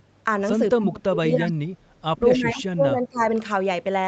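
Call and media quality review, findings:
Speech suppressed in double talk: level dips, thinning and broken-up fragments at 0.76–1.63 s (drops up to roughly 30 dB) and 2.33–3.21 s (around 20 dB). Likely echo canceller misreading simultaneous talk as echo and attenuating the near talker along with it.

Echo leak: faint delayed copy of the talker, 255 ms behind, at 0.81–0.85 s, 1.47–1.52 s and 2.36–2.40 s, roughly 25–30 dB below the speech. Likely residual loudspeaker pickup that the far-end echo canceller failed to remove and sent back.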